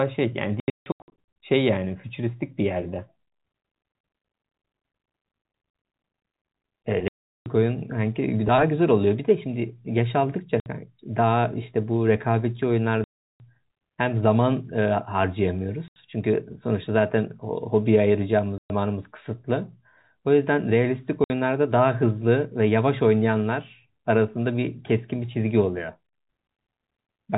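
Packet loss filled with silence first hits at 0.6 to 1.25 s. Holes are scattered through that stretch, the longest about 160 ms. More dropouts follow at 7.08 to 7.46 s, 10.6 to 10.66 s, 13.04 to 13.4 s, 15.88 to 15.96 s, 18.58 to 18.7 s and 21.24 to 21.3 s. Each gap is a multiple of 20 ms, which fits 20 ms packets. The receiver inserted silence for the missing audio. The speech cuts out abruptly, with hard edges. The narrow G.711 telephone band is heard around these gaps.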